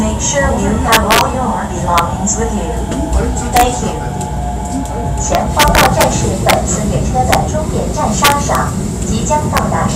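Integer overflow cracks the loud passages at 0.93 to 1.21 s, 1.98 s, 3.56 to 3.63 s, 5.35 to 6.04 s, 6.49 to 6.53 s, 7.33 to 7.35 s, 8.25 to 8.55 s and 9.57 s. Peaks are driven about 2 to 6 dB past the integer limit. Instead of stopping at full scale, they wrap to the opposite sign. Each wrapped peak jumps across the whole range. The result is harsh, violent cracks, far sharper than clipping.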